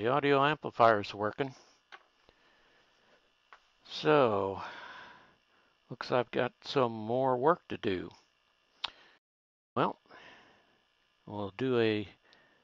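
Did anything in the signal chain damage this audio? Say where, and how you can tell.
Yes: a playback stall at 9.17 to 9.77 s, where the sound cuts to silence for about 0.58 s, likely the player starving for data or its thread blocking.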